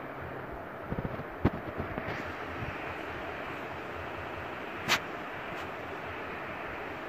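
At 0.98 s and again at 4.18 s, repeated frames make a short stretch play twice more, a 64 ms block, then a 192 ms one, each adding twice that time as a stutter rather than a gap.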